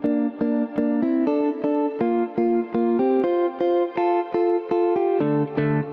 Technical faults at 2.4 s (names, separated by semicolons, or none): gain pumping